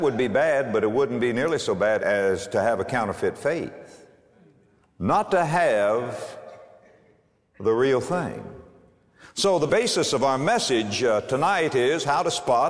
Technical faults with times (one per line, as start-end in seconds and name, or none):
none